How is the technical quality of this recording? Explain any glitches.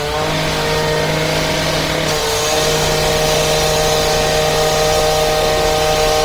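The technical quality is reduced by audible compression damage throughout. This is likely Opus compression. The encoder keeps each band's energy but fills starved bands with folded or noise content. The sound turns grainy and rough, which fits a rate near 24 kbps.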